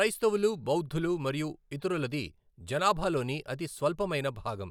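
Nothing to flag: no audible technical faults anywhere in the speech recording.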